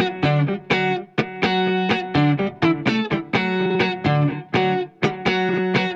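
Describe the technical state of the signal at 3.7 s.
Frames out of order from 3.65 to 3.75 s: two adjacent blocks of about 46 ms play swapped, producing a brief garbled flutter.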